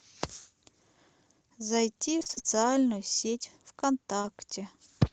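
From about 2.19 to 2.42 s there's a burst of repeated packet loss, and you get that robotic sound. Six short dropouts land in under a quarter second, the longest around 28 ms. Each one gets papered over by stretching the last bit of speech, so nearly half that stretch is concealment, and it comes out choppy with pieces missing. It's all riding on an Opus call path whose top end stops near 8 kHz.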